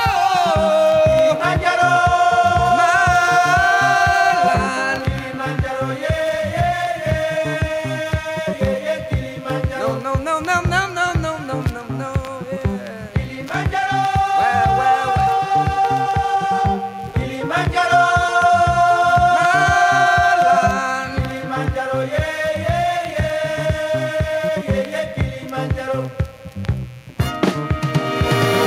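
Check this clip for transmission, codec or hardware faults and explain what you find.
One hardware fault runs through the whole clip. Mains buzz, present from start to finish: sharp switching spikes from a dimmer, rectifier or unshielded cable ride on the 60 Hz supply, firing twice per cycle and spraying harmonics into the kilohertz range. The result is a steady, raspy buzz sitting roughly 30 dB below the sound.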